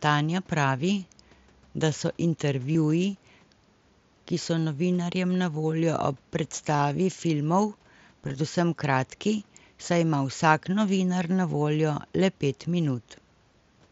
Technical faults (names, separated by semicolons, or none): concealed Bluetooth headset packet loss